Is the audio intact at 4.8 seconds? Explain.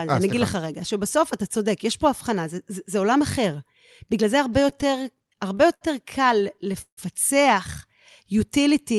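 No. Repeated stalls (stutter) run from 4.45 to 5.83 s. Late packets kept draining the jitter buffer, so the last sound was stretched in 15 brief gaps up to 72 ms long. Nothing is lost, but the audio drags and stutters.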